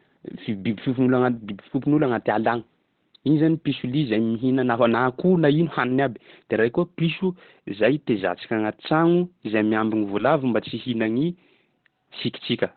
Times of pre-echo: none

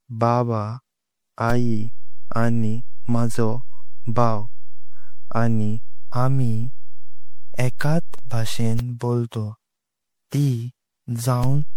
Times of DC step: 1.50-8.79, 11.44-11.77

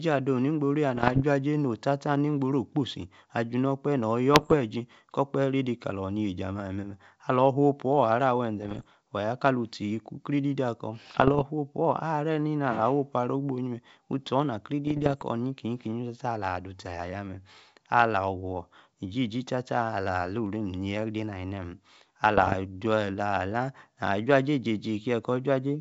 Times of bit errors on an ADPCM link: 0.96-1.22, 4.34-4.55, 8.60-8.84, 11.10-11.43, 14.87-15.23, 22.37-22.55

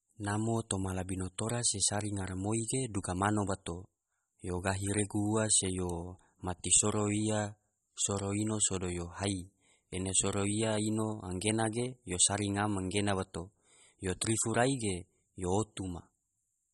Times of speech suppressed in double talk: none

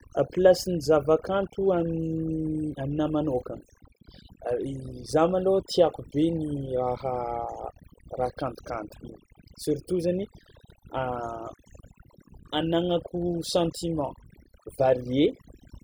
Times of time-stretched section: none

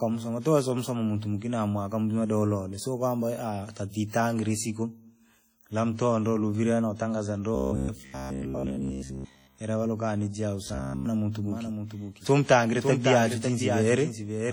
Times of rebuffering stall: none

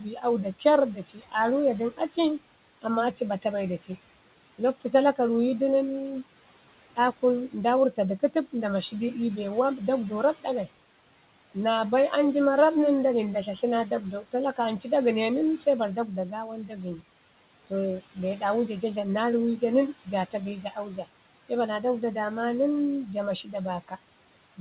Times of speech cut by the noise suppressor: 0.00-2.85, 3.78-5.19, 6.79-11.56, 13.62-21.84, 23.06-24.60

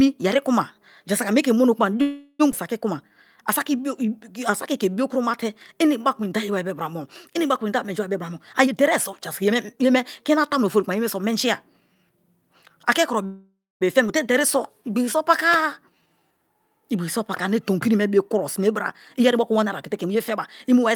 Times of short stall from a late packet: none

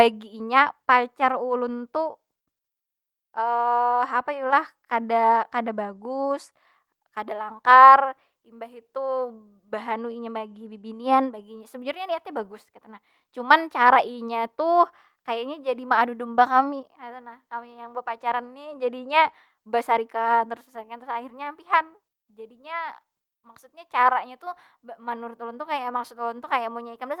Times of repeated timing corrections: 0.04-26.92

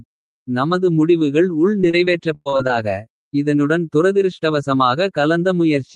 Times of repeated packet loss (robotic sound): 1.81-2.85

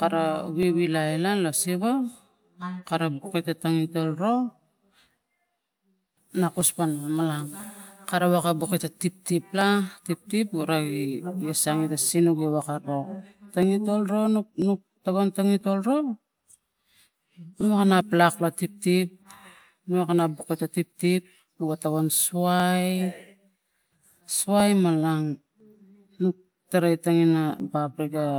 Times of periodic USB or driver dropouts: 0.63-27.60

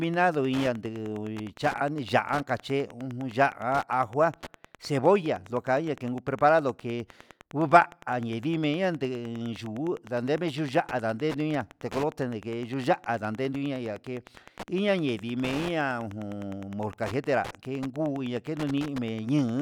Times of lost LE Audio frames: none

